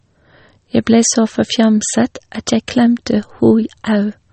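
From start to finish the speech carries plainly audible compression damage, likely MP3 compression. Nothing sounds above 8.4 kHz. The treble stops at that fixed cut-off. The encoder seems starved of bits, which fits a low bitrate around 32 kbps. It drops quiet frequency components, and they flicker in and out between frames. The result is a watery, swirling texture. S sounds turn metallic and chirpy. Sharp onsets smear.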